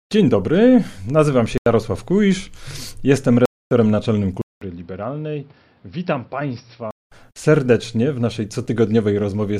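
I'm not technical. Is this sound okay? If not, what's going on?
No, there are a few problems, though none of them wipes out much.

At 1.47 to 1.73 s, right after "dobry nazywam", and again at 3.46 to 3.71 s, the sound simply drops out for about a quarter of a second. That's a corrupt frame muted. Audio is stored in small chunks, a few of them got damaged, and the player swapped in silence instead of playing garbage. The gaps start abruptly, but the timing afterwards stays in step.

From 4.41 to 7.11 s the sound changes character. It goes dull and a bit boxy, loses everything above about 5.7 kHz, turns noticeably quieter, and picks up a faint new background noise. It opens with a short silence of about 0.2 s. That's most likely an input switched to a poorer device, such as another microphone or a headset's call mode. The fuller sound comes back just before "serdecznie w naszej".

Right after "serdecznie w naszej", at 8.64 to 8.66 s, there's a tiny, quiet glitch. 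That's a corrupt FLAC frame. A couple of stored chunks had bits flipped, the decoder rebuilt the sound from wrong numbers from the damaged bit on, and the next chunk plays clean again.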